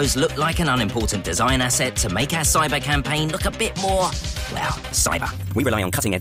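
From 4.49 s to the end at 6.20 s, the sound abruptly rushes forward at roughly 1.73 times its earlier pace while its pitch stays where it was. This is a time-stretched section, here compressed rather than stretched. The likely cause is software squeezing that stretch to fit a shorter length, discarding short slices to hold pitch constant. The dropped pieces leave the passage hurried.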